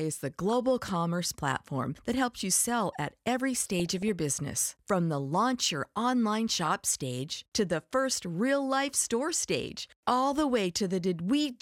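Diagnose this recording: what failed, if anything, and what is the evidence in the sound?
Weak reception let residual bit errors pass the error correction and reach the MP2 data. This is DAB burbling at the codec stage. Corrupted sample values put short blips of noise in single sub-bands, and corrupted scale factors make individual sub-bands jump in level for up to a frame, and the error rate is low, well under one percent. The speech takes on burbling at 0.50–0.53 s, again at 3.80–4.09 s, the longest burst, and at 6.59–6.68 s.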